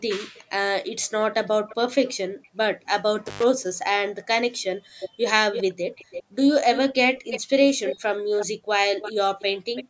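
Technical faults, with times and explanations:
0.36–0.42 s, 1.46–2.13 s, 4.62–8.46 s, 9.0–9.84 s: echo leak. Delayed copies, 331–405 ms late and about 30 to 10 dB down, likely escaped the far end's echo canceller. A spectrogram shows ghost harmonics trailing the originals.
3.27–3.44 s: intermittent contact. The line opens for about 104 ms, cutting the sound to faint hiss. The waveform shows a near-flat gap bounded by crackle spikes.
4.86–4.91 s and 6.23–6.34 s: background gated by the echo canceller. The room sound drops about 27 and 36 dB for roughly 50 and 100 ms, visible as brief notches in the noise floor.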